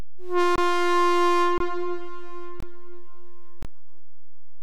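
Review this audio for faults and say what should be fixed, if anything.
Gaps between chunks at 0.56–0.58, 1.58–1.60, 2.60–2.63 and 3.63–3.65 s, each 23 ms, recurring every 1.0 s. Unlike dropouts, nothing is lost; the sound resumes exactly where it paused.

DC offset throughout: the waveform sits shifted from zero by a constant. Unlike low hum, it produces no audible tone, only steady energy at 0 Hz that wastes headroom.

Remove the padding or late-start delay at each chunk join during playback or storage, and apply a high-pass filter or DC removal before output.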